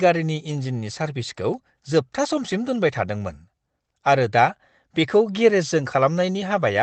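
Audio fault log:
No faults are found in this speech recording. The sound has come through a WebRTC call path, and its top end stopping near 8 kHz fits an Opus stream at around 24 kbps.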